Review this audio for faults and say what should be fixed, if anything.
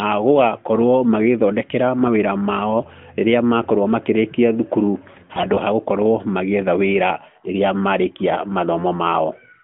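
AMR bit errors damage the speech from 5.12 to 5.60 s, just after "rĩrĩa makorwo makĩrĩkia thukuru". For that half second, which fits about two dozen 20 ms frames, the sound turns hoarse, scratchy and gargly. Pitch and loudness stay roughly steady. The weaker-protected bits in each frame arrived corrupted, at a rate of about 5 percent, while the check on the core bits still passed. So the decoder placed its excitation pulses wrongly and used wrong gain and spectral values. Stronger channel coding or a better radio link would prevent this.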